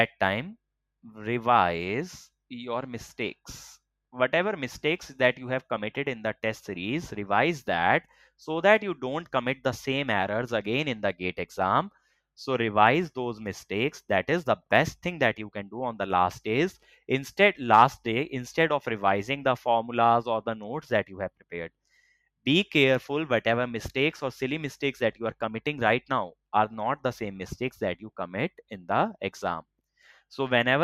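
Sound cut by the noise suppressor at 8.04 to 8.29 s and 11.91 to 12.19 s: mistaken for noise, the audio sinks by about 10 dB, then about 15 dB.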